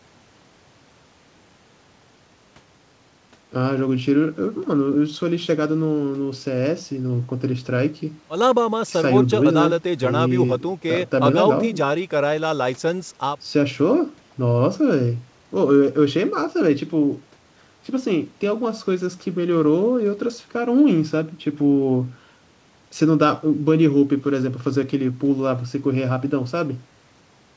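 Nothing goes wrong anywhere in this recording; the speech comes over a regular call connection with a wideband codec, so there's simply nothing up above 8 kHz, which is just how that kind of link sounds.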